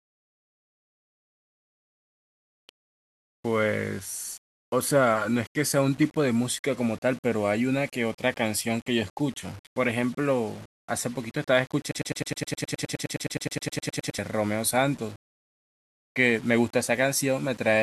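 A speech recording carries a grainy, rasping distortion from start to finish that rides on the voice itself, the likely result of low bit depth without dither, with the signal rounded to about 7 bits. The error sits only around 25 dB or so below the speech. Unlike steady hiss or dithered noise, it rises and falls with the voice, turns soft passages gritty, and drops away or sputters in the pauses instead of lingering as a constant floor. From 11.91 s to 14.19 s a broken-record loop takes over. A 104 ms fragment repeats exactly, back to back, 22 times, likely because a player, encoder or stream stalled and kept re-sending the last piece it held. What sets this apart from an echo or a stutter is that the copies are identical and do not decay. Whatever should have played during those two seconds or so is missing.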